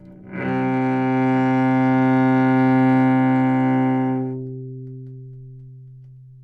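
Hard clipping runs from 1.97 to 3.10 s. The signal is driven about 1 dB past what a stage in the chain can pass, so the highest peaks are sliced flat. Those flattened tops add upper harmonics, heard as brief crackle on the loudest moments rather than constant fuzz.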